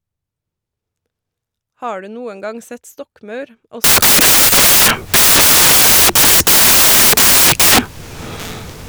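Samples built from the wrong bytes after 3.84 s: misordered bytes make low bits dominate, giving loud noise close to white on louder passages.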